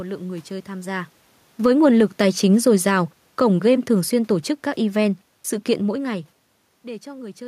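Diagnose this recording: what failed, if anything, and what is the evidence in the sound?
Call processing: automatic gain falling from 1.5 s to 6.23 s, after "người chơi tham gia". The AGC judged the input too loud or its background noise too strong, pulling level and background down together by about 7 dB.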